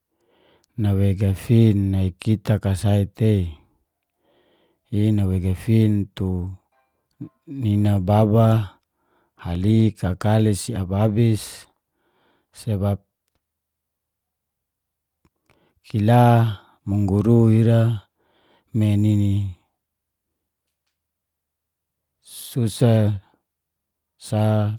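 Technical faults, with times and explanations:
No technical faults can be heard in this speech clip. No working path is listed, so there is nothing further to point to.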